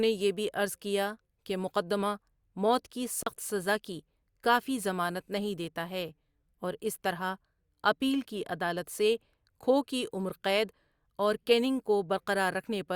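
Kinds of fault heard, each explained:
Block of digital silence: the audio drops out from 3.23 to 3.26 s, a 36 ms hole in the speech with no fade. The waveform flatlines there; the spectrogram shows a blank column.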